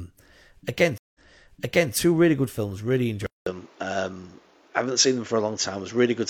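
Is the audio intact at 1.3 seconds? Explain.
No. A stream reconnect spans 0.98 to 1.94 s: the connection dropped, and the player reconnected and restarted its decoder mid-stream. The sound goes silent for 167 ms, then resumes about 0.79 s earlier, replaying material leading into "really good films".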